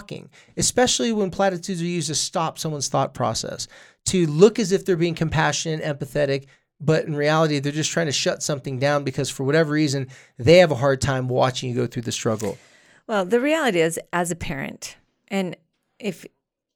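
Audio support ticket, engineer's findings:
No faults found on listening to the speech clip. Nothing to attribute to any component.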